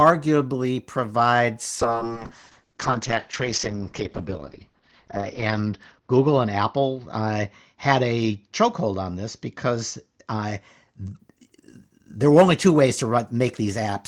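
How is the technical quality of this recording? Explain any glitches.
The recording has a real problem: a call bitrate drop runs from 1.83 s to 11.25 s. The connection's bandwidth estimate fell, so the encoder had far fewer bits to work with. The band narrows from about 20 kHz to 6 kHz, and the speech goes muffled and rough, bottoming out for roughly 3.6 s. That sounds like something near 7 kbps, down from around 32.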